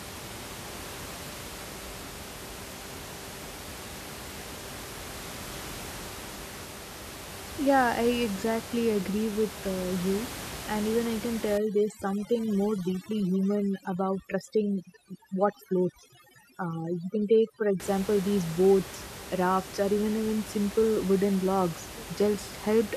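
The clip is speech with audible room noise about 13 dB below the voice. Overdone noise removal hits from 11.58 s to 17.80 s, right after "even I can" and ending before "these boats rafts or". The reduction is set far too hard. Frequency bands near the noise estimate are pulled down or cut entirely. The room background drops and breaks up into twinkling specks. The quieter parts of the voice are stripped away too.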